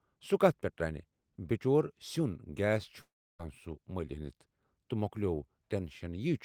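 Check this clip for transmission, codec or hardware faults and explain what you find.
The clip has one fault, in the speech.

Long network dropout, from 3.01 to 3.41 s. The likely cause is a run of audio that never reached the receiver, so the receiver stretched the last sound it had to cover the gap. That fill is heard as a brief buzzy or hissy continuation that fades out, leaving about 0.31 s of near silence. When the speech resumes, it has skipped ahead, and roughly 0.38 s of it is lost.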